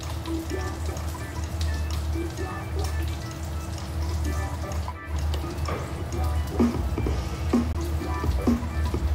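At 7.73 to 7.75 s the sound cuts out for about 19 ms and comes back further along, as if it had kept playing through the gap. That's most likely a Bluetooth dropout, with one packet, by the sound of it, missing the headphones' deadline.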